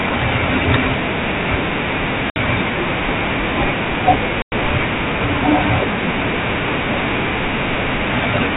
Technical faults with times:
2.30-2.37 packet loss on an ADPCM call
4.42-4.53 packet loss on an ADPCM call

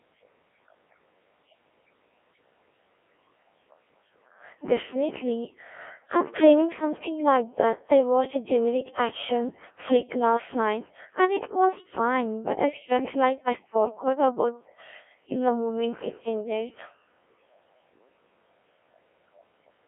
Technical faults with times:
0.00-19.87 Codec 2 vocoder

